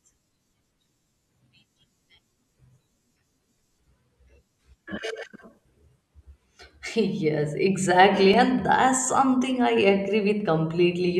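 At 8.34 s a single sharp tick cuts through the speech, too brief to register as a gap. It is a block of digital silence lasting about 2.7 ms, which fits a 128-sample buffer left unfilled. For that instant the output holds only zeros, so the waveform falls straight to nothing and jumps back with no fade. The two abrupt edges, so close together, merge into one click.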